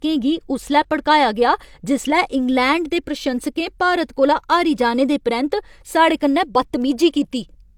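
All the way through the speech, there's nothing above 20.2 kHz, and the sound carries the artefacts of an earlier low-bitrate encoding. That points to low-bitrate audio saved at a high bitrate, likely something like 48 kbit/s HE-AAC re-saved as 320 kbit/s MP3, which can't restore what was lost.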